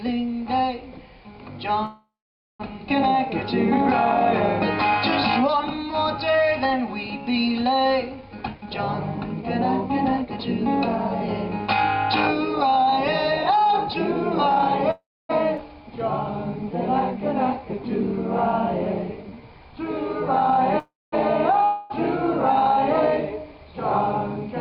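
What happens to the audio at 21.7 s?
Around 21.7 s there's a gap from 21.64 to 21.92 s where the audio is replaced by a fading continuation of the preceding sound, a smear lasting about 250 ms. It then picks up further along, with that stretch skipped. This is likely a long network dropout, where the receiver fills in with concealment when nothing arrives.

That moment also sits inside a jitter buffer speed-up running from 20.40 to 24.48 s. The receiver trims tiny pitch-period slices to drain excess buffered audio, about a tenth of a second in total, so everything plays roughly 2% fast at unchanged pitch.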